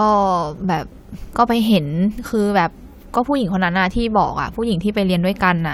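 No technical faults can be heard in this speech recording. Nothing in how the audio was captured or delivered stands out at any point.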